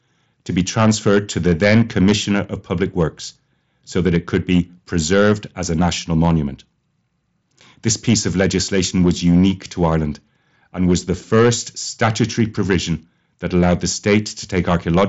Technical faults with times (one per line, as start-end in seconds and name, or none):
0.00-15.08 hard clipping